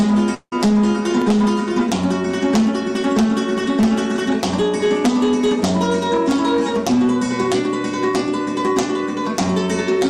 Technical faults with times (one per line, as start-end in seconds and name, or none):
0.00-10.10 hard clipping
0.34-0.53 long network dropout